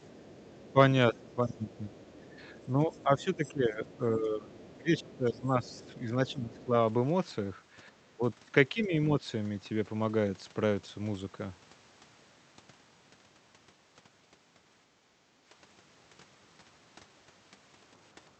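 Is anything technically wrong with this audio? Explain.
Yes, there are three kinds of echo-canceller fault in this speech.

Other side's voice leaking through, from 0 to 3.52 s and 4.61 to 6.65 s: a faint second voice, roughly 25 dB below the talker, sits under the speech. This is likely far-end audio from the loudspeaker that the echo canceller failed to remove.

Speech suppressed in double talk, at 0.73 to 1.88 s, 2.74 to 6.73 s and 8.74 to 9.22 s: the talker's own voice sinks by up to roughly 20 dB, by about 15 dB in the long middle stretch, and more mildly near 9 s. The likely cause is the canceller mistaking overlapping talk for echo and attenuating everything. The main voice itself ducks, which separates this from a level drop in the room sound.

Background gated by the echo canceller, at 14.9 to 14.98 s: the room tone dips by about 7 dB for a brief moment, roughly 50 ms, then recovers. 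The canceller clamped the microphone while the loudspeaker played.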